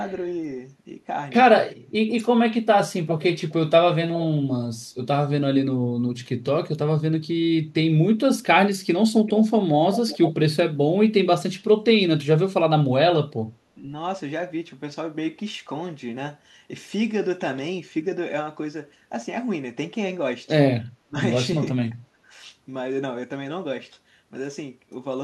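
Echo leak appears in this speech clip at 3.39 to 3.53 s, 9.26 to 9.5 s and 9.95 to 10.32 s, where a delayed copy of the talker trails in about 0.4 s behind (407 ms at first, then 389 ms), faint at first and growing fairly strong by the third scrap. The likely cause is a far end on a loudspeaker whose echo canceller let part of its microphone pickup return down the line. Speech suppressed in double talk follows at 13.75 to 13.87 s, 21.04 to 21.16 s and 22.17 to 22.32 s. The voice briefly dips, by roughly 5 dB, then as much as 25 dB, then around 15 dB, each lasting about a tenth of a second. An echo canceller facing both sides talking at once, unable to tell its own talker from the loudspeaker echo, is likely turning both down.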